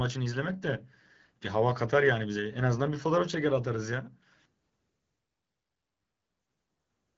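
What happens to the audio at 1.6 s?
Nothing goes wrong at 1.6 s: the speech carries on intact through that moment, with only the light coloration of the AMR wideband (HD Voice) codec at 12.65 kbit/s that runs through the whole clip.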